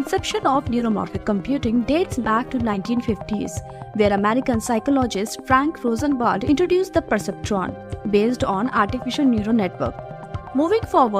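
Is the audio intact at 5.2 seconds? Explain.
Yes, the audio is intact at 5.2 seconds, with no fault audible at that point.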